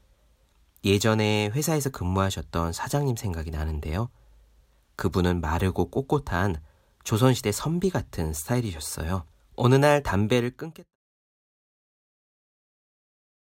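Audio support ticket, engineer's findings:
Nothing stood out on listening to this speech clip, and the fade-out that begins around 10 s and completes at 10.96 s is smooth, with no click or hard edge.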